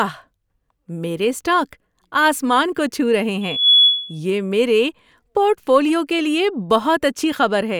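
From 3.41 to 4.20 s the microphone picks up its own loudspeaker strongly enough that the loop gain passes one at 3.4 kHz, producing loudspeaker feedback squeal. Just after "کو چھو رہے", a pure tone rises over about a third of a second into a piercing whistle that sits somewhat louder than the speech. It then holds, clearing before "یہ میرے پورٹ فولیو".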